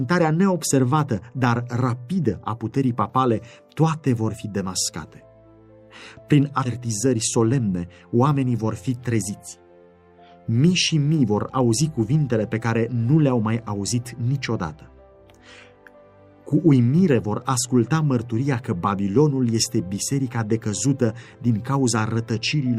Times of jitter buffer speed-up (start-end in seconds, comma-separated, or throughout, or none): 6.77-8.64